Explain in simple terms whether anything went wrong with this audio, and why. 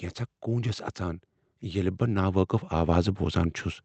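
Yes, something went wrong: automatic gain rising. The volume control decided the input was too quiet and kept turning it up, so from 0.45 to 3.65 s the speech and background slowly swell louder together.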